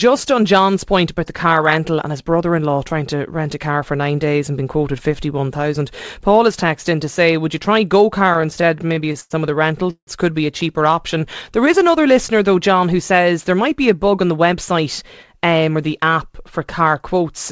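From 8.20 to 9.32 s, just before "of the", the speech drags and stutters through 14 brief stalls. These repeated stalls (stutter) come from late packets draining the jitter buffer, which is refilled with continued sound totalling 244 ms, the longest gap 100 ms.

Right after "of the", from 9.90 to 10.09 s, a fading continuation drops into 80 ms of silence. This call audio freeze inserts 168 ms, likely from packets held up in transit.

Between "who says there" and "um or the app", from 13.54 to 15.38 s, the speech sounds hurried at an unchanged pitch, running at 107%. This jitter buffer speed-up trims about 150 ms of pitch-period slices to shed excess delay, over a G.722 path that carries nothing above 8 kHz.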